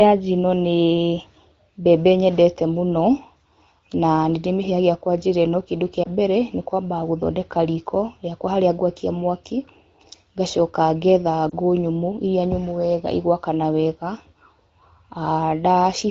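At 6.03 to 6.08 s and again at 11.50 to 11.54 s, the speech has a brief dip or warble. Each is a lost AMR speech frame: a single 20 ms frame failed its checksum, so the decoder filled the gap by repeating the previous frame's pitch and vocal tract settings at reduced gain. The wideband coding around these points is clear, consistent with AMR-WB at about 15.85 kbit/s.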